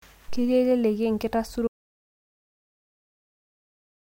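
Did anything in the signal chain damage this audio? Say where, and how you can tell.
Yes. At 1.68 s the speech cuts off mid-flow into an audio dropout to silence that runs right to the end, silent with no room tone underneath. That points to the input side, most likely a dropped device or link while the recorder kept writing empty samples.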